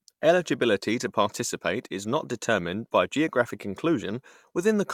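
No technical faults can be heard anywhere in this recording.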